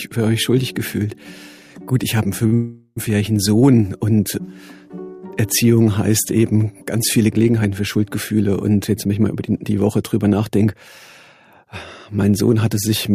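At 2.46 s a short stall from a late packet begins. A packet arrived late, the jitter buffer emptied, and the receiver stretched the last sound by 55 ms before resuming at the same point. The held sound carries a faint buzz or dip, and nothing is lost.

From 2.54 s to 2.98 s a call audio freeze follows. The last sound is extended as a fading buzz or hiss for about 425 ms, ending in roughly 10 ms of silence. The audio then picks up where it stopped. This is likely packets held up in transit draining the jitter buffer, so the stall adds delay and removes no material.

Between 9.02 s and 10.90 s a jitter buffer speed-up runs. With excess audio queued, the receiver repeatedly trims short pitch-period slices, about a fifth of a second in total. The sound plays at 111% speed without a pitch change and comes across as hurried.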